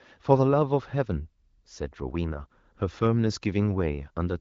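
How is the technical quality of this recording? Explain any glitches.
No faults or glitches audible.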